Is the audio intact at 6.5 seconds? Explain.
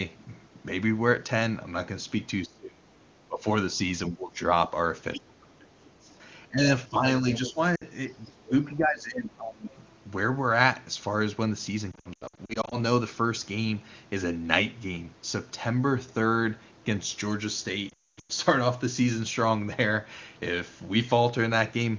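No. The speech there sits inside a stretch of speech suppressed in double talk, from 4.09 to 7.59 s. It dips and cuts out in pieces, about 20 dB at worst. The likely cause is an echo canceller mistaking overlapping talk for echo.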